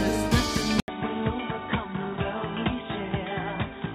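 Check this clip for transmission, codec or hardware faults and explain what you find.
One fault is present: at 0.8 s the sound goes silent for 80 ms, then resumes duller, boxier and quieter for the rest of the clip. The likely cause is the input switched to a poorer device, with capture moving mid-recording to a different microphone or a headset call profile. From the switch onward nothing above 3.8 kHz gets through, the level drops by about 5 dB, and a new noise floor appears, sitting only around 30 dB below the signal.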